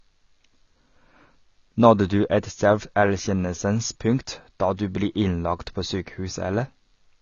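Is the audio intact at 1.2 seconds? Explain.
No, at 1.2 seconds, as throughout, the speech sounds dull and smeared, with nothing above 6.9 kHz, likely AAC compression at a low bitrate, around 24 kbps, dropping and thinning the treble.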